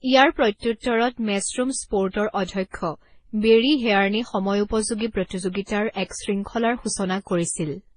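From start to finish, the speech has nothing above 9.8 kHz. Several kinds of compression artefact sit on top of one another. This is likely transcoding between lossy codecs, with each low-bitrate pass re-encoding the last one's damage and adding its own artefacts.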